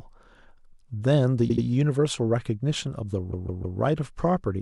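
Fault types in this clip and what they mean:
Repeated frames: at 1.48 to 1.63 s a 78 ms block plays two extra times, and at 3.31 to 3.78 s a 157 ms block repeats three more times. Compressed frames were sent again, producing stutters and lengthening the speech.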